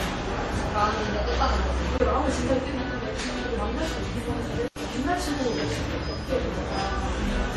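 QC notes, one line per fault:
throughout: transcoding between lossy codecs. The audio has nothing above 13.1 kHz, and two kinds of coding artefact sit on top of each other. This likely comes from a low-rate MP3, around 40 kbit/s, later re-encoded to WMA at about 64 kbit/s. The second encoder wastes its bits reproducing the first one's damage and adds its own. The lowest cut-off in the chain survives.
1.98–2.00 s and 4.68–4.76 s: block of digital silence. Both times the sound drops straight to silence and returns with no fade. The first gap lasts 20 ms and the second 80 ms. The longer one is a short hole in the sound. This pattern fits samples left unfilled when the output buffer was not written in time.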